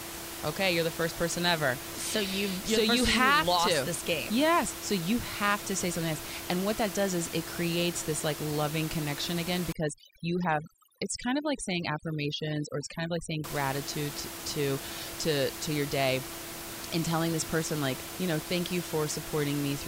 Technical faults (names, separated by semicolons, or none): overdone noise removal